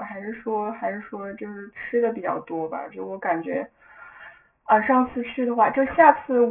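From start to finish there's aliasing. Everything folds at 3 kHz, which fits a drop to a 6 kHz rate with no filter first. Upper content mirrors back as unrelated tones maybe 20 dB under the speech, so sibilants turn gritty and metallic, and the spectrum runs hard into the 3 kHz edge.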